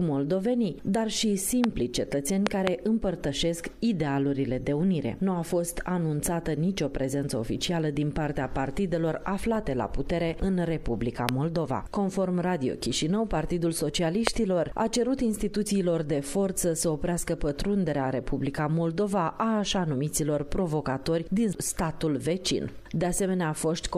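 Loud pops at 1.64–1.66 s, a double pop from 2.47 to 2.69 s, then 11.29–11.31 s and 14.27–14.29 s, each about 20 to 25 dB above the sound, sharp thumps riding over it, likely from brief electrical voltage spikes.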